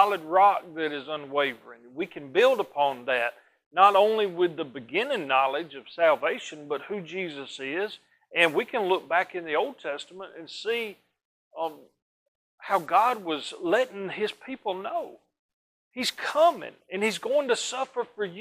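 No technical faults are audible anywhere in the audio.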